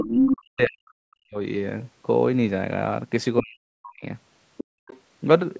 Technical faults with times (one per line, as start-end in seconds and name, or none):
0.00-0.37 other side's voice leaking through
0.38-1.37 speech suppressed in double talk
3.40-4.05 speech suppressed in double talk
4.57-5.00 other side's voice leaking through
4.64-4.87 background gated by the echo canceller